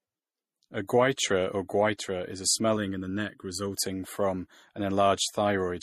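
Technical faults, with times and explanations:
Throughout: transcoding between lossy codecs. The speech carries two overlapping layers of coding artefacts, smeared transients and swirly, warbling highs, with nothing above 15.3 kHz. This likely comes from a low-bitrate Vorbis encode re-encoded as MP3, around 48 kbit/s each. On a spectrogram the top edge is a hard flat ceiling, with patchy, blocky holes below it.
2.77 to 3.77 s: channel delay (comb filtering). Just after "or goiter is a", one channel lags the other by under a millisecond, so the mono sum cancels at regular intervals. The first notch is near 700 Hz, with further notches evenly spaced above it, and the speech turns hollow and phasey. A spectrogram shows dark horizontal stripes for that second.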